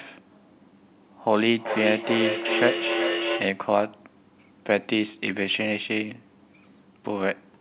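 From 1.47 s to 3.66 s the speech picks up a feedback echo between two devices: a second device on the same call plays this microphone's audio back into the room, the microphone captures it again, and neither echo canceller removes sound from the other device's loudspeaker. Each syllable returns roughly every 0.4 s, thinner and ringing, peaking at about 3 dB below the direct speech. On a spectrogram the harmonic stacks repeat as fainter copies shifted right at that spacing, and the waveform shows trailing bursts between syllables. The whole clip stops sharply at 4 kHz, which fits the narrowband G.711 mu-law codec of the call path.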